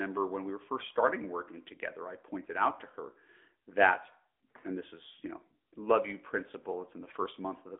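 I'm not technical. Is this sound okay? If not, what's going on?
No. From start to finish, this speech has passed through an AMR narrowband mobile codec, the system 2G and 3G phones use to squeeze a voice into a tiny data stream. It keeps only a narrow slice of sound, roughly 250 Hz to 3.6 kHz, with nothing above about 3.7 kHz, and rebuilds the voice from a simplified model. So it sounds muffled and boxy like a phone call, with a plainly audible buzzy, artificial edge.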